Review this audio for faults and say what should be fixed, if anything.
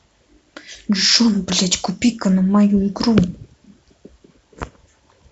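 At 2.02 s there's a quick blip in the speech: a corrupt frame decoded, with a few damaged frames played anyway, so flipped bits put energy at wrong frequencies, peaking around -25 dBFS. Worth fixing: add error checking and conceal bad frames rather than decoding them.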